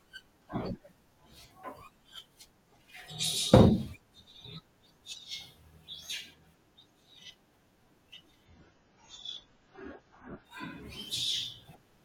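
Speech, with an adaptive stream dropping to a lower bitrate from 8.45 to 10.45 s: the treble abruptly dulls and codec artefacts rise, as a much lower-bitrate AAC rendition would, with no gap. A spectrogram shows content cut off sharply above 7.4 kHz for those two seconds.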